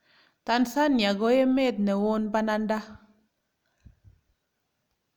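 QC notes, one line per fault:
Nothing stood out on listening to this speech clip.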